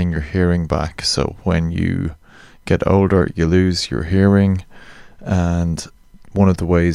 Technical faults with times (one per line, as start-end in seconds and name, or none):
none